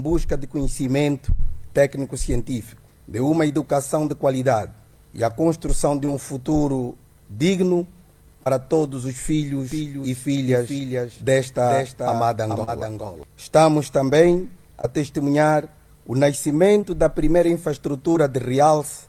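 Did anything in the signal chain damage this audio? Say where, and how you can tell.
Yes. Short concealed packet loss at the network stage: about 20 ms of audio arrived too late at 3.47, 6.05, 8.43, 14.81, 16.81 and 18.12 s, and about 40 ms at 12.64 s. The decoder extended the preceding sound across each gap, so each one is a brief smear or wobble.

A doubled audio track appears from 9.72 to 13.23 s, likely from a second, slower capture path or an edit holding two offset copies. A full-band repeat trails roughly 0.4 s behind, about 5 dB quieter. It has no room decay and switches on and off abruptly.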